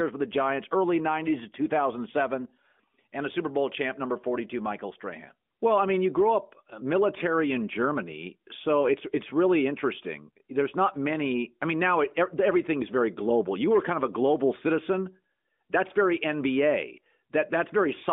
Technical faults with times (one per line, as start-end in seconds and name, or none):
none